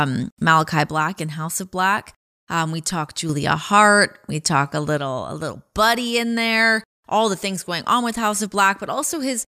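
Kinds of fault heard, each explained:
One channel drops out: one side of the stereo feed likely cuts out for a stretch, so only the surviving channel reaches the mono sum. The speech drops abruptly by about 6 dB from 0.89 to 3.29 s, recovers, then sinks again at 4.98 s just after "talk a" and stays low to the end. Anything carried only on the lost side vanishes during those spans.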